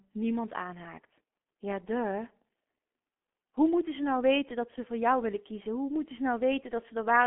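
Throughout, the speech has gone through heavy G.723.1 coding, fitting a 6.3 kbit/s stream, which removes everything above 3.7 kHz and leaves it muffled, hoarse and blurred.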